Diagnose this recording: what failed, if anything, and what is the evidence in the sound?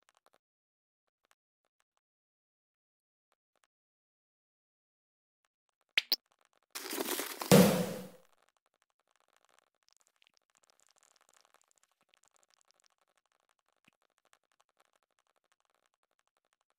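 Nothing failed; no faults found.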